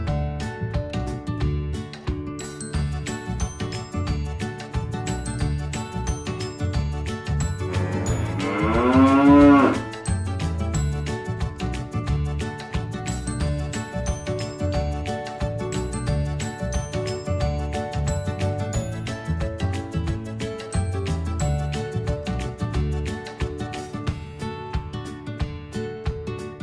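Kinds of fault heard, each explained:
No technical faults are audible anywhere in the clip.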